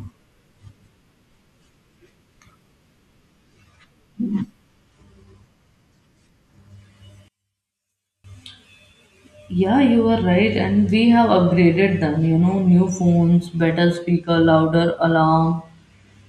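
It's a speech clip, and from 7.28 to 8.24 s the voice drops away by about 34 dB, leaving just a faint trace. That's likely one channel inverted: with one side's polarity flipped, the centred voice cancels itself when the channels are summed to mono.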